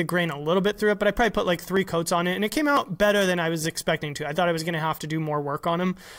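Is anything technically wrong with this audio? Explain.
Yes. At 1.77 s, between "I probably put like" and "coats on it and", and at 2.77 s, between "it and it came" and "better than I was", the speech jumps forward with no gap. This is likely a dropped buffer (overrun): a few milliseconds, then about 10 ms, were overwritten before capture.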